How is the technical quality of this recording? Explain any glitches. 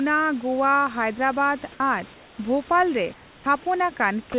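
The recording is a narrowband call: everything above 4 kHz is missing, which fits G.711 mu-law coding at 64 kbps, and a steady room noise sits about 26 dB below the speech. On top of that, the voice detector's gating causes three kinds of glitch.

Sound dropped by the voice detector occurs from 1.72 to 1.80 s and again from 4.32 to 4.34 s. The likely cause is that the sender's detector mistook the sound for background and stopped transmitting. The receiver then filled the gap with synthetic noise. In the first gap about 40 ms of real sound is lost inside an 80 ms patch. In the second, 20 ms is lost. Unlike the comfort-noise pauses, these gaps cut into the sound itself, so it briefly turns to hiss and then returns.

Comfort noise in place of the background fills 2.14 to 2.38 s and 3.14 to 3.46 s. During these pauses the sender likely sent nothing, and the receiver generated noise roughly matched to the room. 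The real background, which lies about 28 dB below the loudest sound, is swapped for a smooth, featureless hiss. That hiss is about 2 dB quieter in the first pause and about 4 dB quieter in the second. No sound is lost here, only the texture of the background.

Onset clipped by the voice detector occurs from 3.44 to 3.46 s, at the end of the second comfort-noise pause. The detector was likely slow to register that sound had resumed, so the first 20 ms were never sent. The sound therefore starts abruptly, without its soft attack. This is a clipped beginning rather than a hole in the middle of the sound, which is what distinguishes it from the dropouts.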